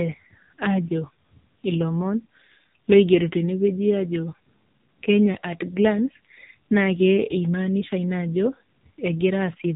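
Speech runs through an AMR narrowband mobile codec for its whole length. Nothing above 3.7 kHz survives, and the heavy, buzzy, synthetic coloration from the pulse-driven vocal-tract model fits a low mode around 6.7 kbps, where few bits remain for each frame.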